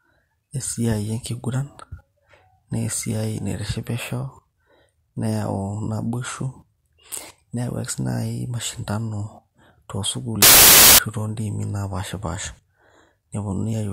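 From 10.42 to 10.99 s the speech turns into loud, harsh broadband noise. These are samples built from the wrong bytes. Each sample's bytes were joined in the wrong order or alignment. The rapidly changing low bits became the dominant part of every value.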